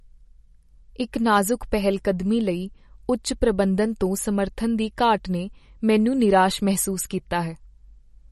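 Throughout the speech, nothing sounds above 12.1 kHz and the sound has a watery, swirly texture with smeared attacks, most likely MP3 compression at a low bitrate, around 41 kbps. Unlike a simple low-pass filter, weak frequency components flicker on and off between frames.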